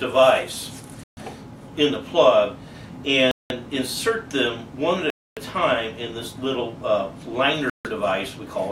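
At 1.03, 3.31, 5.10 and 7.70 s the sound cuts to dead silence for about 137, 189, 267 and 153 ms, then resumes where it stopped. This is likely a Bluetooth stall, where the headphones' buffer ran dry awaiting resent packets. Each gap shows as a flat waveform and a blank vertical band on a spectrogram.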